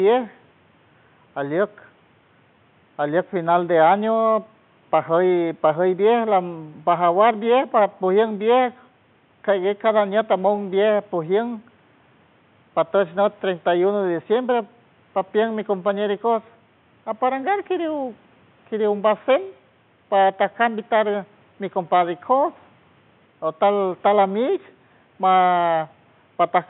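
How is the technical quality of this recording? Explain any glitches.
No technical faults are audible.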